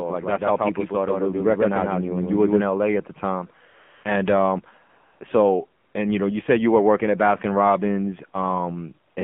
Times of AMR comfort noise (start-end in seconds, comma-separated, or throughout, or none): 3.68-4.04, 4.90-5.20, 5.82-5.94, 9.12-9.16